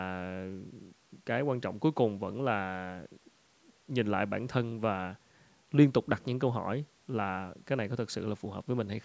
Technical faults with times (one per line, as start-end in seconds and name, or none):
none